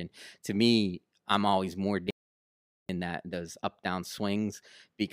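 At 2.11 s, just after "me I'm always more", the speech stops dead and the track falls into silence, with no room tone or background hiss underneath. It resumes abruptly at 2.89 s on "that those up down", so about 0.79 s of speech is simply missing. This is an audio dropout to silence, likely caused by the input signal being lost briefly while the recorder kept writing silence.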